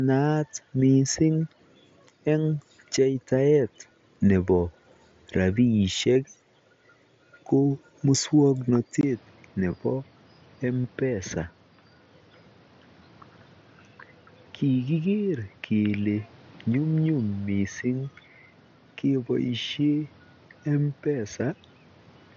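At 6.14 s the speech briefly turns into a short buzzy hold, too short to catch easily. This is concealed Bluetooth headset packet loss: about 15 ms of data from the headset never arrived, and the receiver filled the hole by repeating the closest-matching fragment of the waveform just before it, which fits two 7.5 ms frames.

From 9.01 s to the end the sound turns dull and boxy after a 20 ms silence. Nothing reaches above 6.4 kHz, the level falls by roughly 5 dB, and a new background noise sits about 30 dB under the speech. The likely cause is that the input switched to a poorer device, a different microphone or a headset's narrower call path with its own tone, level and noise.

The same packet loss concealment returns three times. At 9.72 s there is a barely audible patch of repeated sound lasting 7.5 ms. From 10.82 to 10.84 s a more noticeable buzzy hold covers 30 ms, with a slight warble as the real audio comes back. 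At 17.43 s there is another 7.5 ms patch. Those gaps fit one, four and one lost frames. Underneath all of this the mSBC headset link adds only light graininess.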